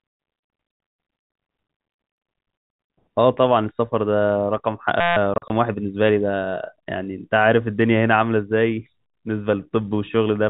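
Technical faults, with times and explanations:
5.00 to 5.17 s, system hang loop: the audio locks onto one 5.8 ms sliver and repeats it about 28 times, so you hear a steady buzz near 172 Hz. The driver stalled while the hardware kept cycling a tiny ring buffer, which fits 256 samples.
5.34 to 5.50 s, packet loss filled with silence: 80 ms of speech drops out in gaps scattered over 160 ms, the longest 40 ms, with hard edges. Lost packets were swapped for silence, and the gap sizes fit 20 ms packets on this G.711 telephone-band call.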